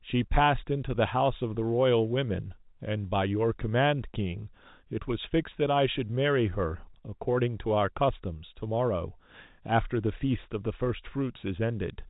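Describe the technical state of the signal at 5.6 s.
At 5.6 s the audio is intact, with the speech passing cleanly through G.711 telephone coding, which limits it to nothing above about 3.8 kHz.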